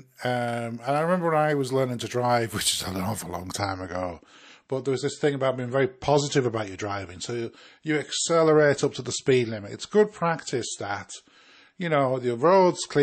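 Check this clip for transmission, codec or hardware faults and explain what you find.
One fault is present. From 3.59 s, right after "is an awful long", the adaptive stream drops to a lower bitrate, consistent with roughly 33 kbit/s MP3, through to the end. The speech loses everything above 8.3 kHz, turning dull and swirly with no gap.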